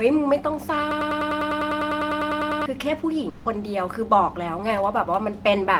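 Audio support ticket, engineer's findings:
Broken-record loop, 0.91 to 2.66 s: a 100 ms fragment repeats back to back 17 times. Likely stalled stream resending its last buffer; the underlying audio is lost.

Long network dropout, 3.29 to 3.47 s: a 160 ms gap filled by a fading continuation of the preceding sound, with no silence. Likely packet loss concealment.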